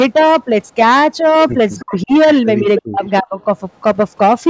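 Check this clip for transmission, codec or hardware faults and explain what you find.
Two faults recur through this speech clip: brief echo leaks and speech suppressed during double talk.

Echo leak, at 1.77 to 1.83 s, 2.77 to 2.82 s, 3.05 to 3.10 s and 3.40 to 3.44 s: a loudspeaker-side echo canceller likely let residual pickup through. Short delayed copies trail the speech by 320 ms, from roughly 10 dB below it at 2.77 s to about 40 dB below at 3.40 s.

Speech suppressed in double talk, at 1.81 to 2.12 s, 2.61 to 3.02 s and 3.21 to 3.36 s: the canceller likely mistook the near talker for echo and attenuated both. The speech ducks in patches, sinking by roughly 30 to 40 dB at its deepest.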